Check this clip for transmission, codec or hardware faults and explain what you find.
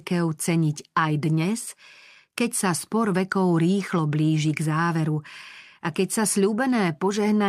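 No faults detected in this recording.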